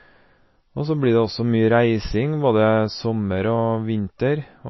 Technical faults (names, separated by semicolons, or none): MP3 compression